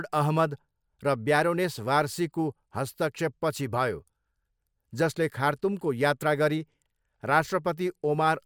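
Nothing technically wrong turns up in this short bit of speech; there's simply no fault to point to anywhere in it.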